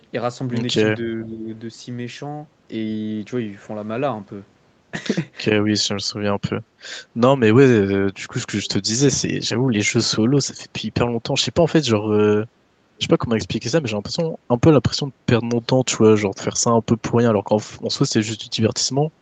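Speech recorded through a call's microphone chain, whose band stops at 8 kHz, carries two faults. An echo leak appears as brief scraps at 0.00–0.05 s, 8.64–8.69 s and 12.97–13.01 s. Each is a faint copy of earlier sound returning 444 ms late, most likely because a loudspeaker's output reached the far-side microphone and its echo canceller let a residue through. The copies are very quiet, from roughly 40 dB below the speech in the first to roughly 30 dB below in the last. On a spectrogram they show as weak smears repeating the pattern from 444 ms before. In the waveform they are barely visible bumps. At 1.23–1.48 s the speech is suppressed in double talk: the level sags by a few dB for about a third of a second. The likely cause is an echo canceller turning down the whole signal while both sides talked at once. The waveform shows a brief pinched stretch in the envelope, and the spectrogram shows a slightly dimmed band across the speech harmonics.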